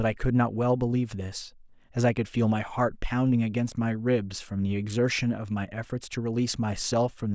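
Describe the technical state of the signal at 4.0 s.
At 4.0 s the speech signal is intact, with no dropout, distortion, glitch or other technical fault.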